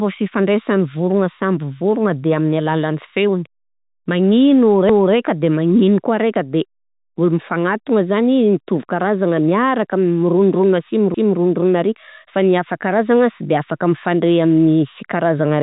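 At 4.89 to 5.14 s, just before "de magneno", and at 11.14 to 11.39 s, after "miaraka mirondrona asy", overlapping chunks replay 250 ms of speech, heard as a stutter. Each 6 s chunk starts before the last ends. The band stops near 3.8 kHz, as telephone coding does.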